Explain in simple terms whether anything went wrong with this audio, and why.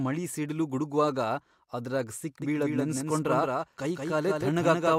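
Something did go wrong, starting at 2.42 s, right after "ಮಳಿ ಸಿಡಿಲು ಗುಡಗ್ವಾಗ ಅದ್ರಾಗ್". From there to the end, the speech is heard twice. A second copy trails the first by about a fifth of a second and is a little quieter. This is a doubled audio track. The copy has no echo tail or room sound, and it begins suddenly. The likely cause is the same sound being recorded again through a slower path and mixed back in.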